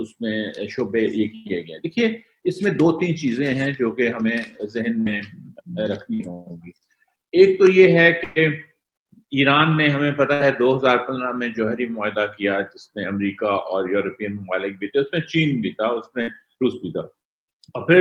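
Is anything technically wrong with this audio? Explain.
Yes. A burst of packet loss occurs five times, at 4.99 to 5.09 s, 6.14 to 6.23 s, 8.24 to 8.38 s, 10.34 to 10.43 s and 16.22 to 16.30 s. Several consecutive packets never arrived in time, so the receiver stretched the last audio it had and faded it out to cover about 60 ms each time (120 ms at 8.24 s). Each gap sounds like a brief held buzz or hiss that dies away before the sound jumps ahead, with that stretch of audio missing.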